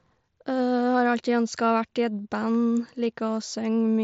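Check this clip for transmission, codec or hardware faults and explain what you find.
No faults turn up in this speech clip, which sounds as a wideband Bluetooth headset link should, with only the faint grain on louder moments that the mSBC codec brings along.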